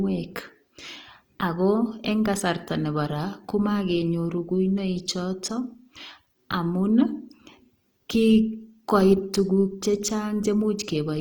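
Throughout the speech there is plainly audible Opus compression, likely from a CELT-mode encode near 24 kbps. Starved bands are refilled with folded or noise-like energy, making the speech grainy and rough. A spectrogram shows speckled, noisy upper bands, cut off near 20.4 kHz.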